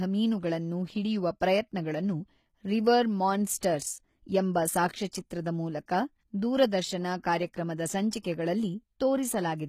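HE-AAC compression runs through the whole of this speech recording. The treble sounds synthetic and metallic, with nothing above 14.9 kHz, and the damage is plainly audible. The likely cause is spectral band replication at a bitrate around 20 kbps: only the lower spectrum is coded, and the upper bands are copied up from below and shaped with a coarse envelope, so the high harmonics no longer line up with the real ones. Pre-echo appears at 3.61 s and again at 5.12 s, a short hiss smeared roughly 18 ms and 15 ms ahead of sharp attacks. The codec spreads quantisation noise evenly across each transform block, so noise sized for the loud onset also fills the quiet instant before it, blurring the attack.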